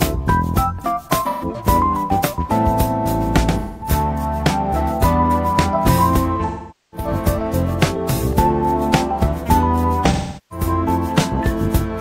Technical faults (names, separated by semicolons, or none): AAC frame loss with concealment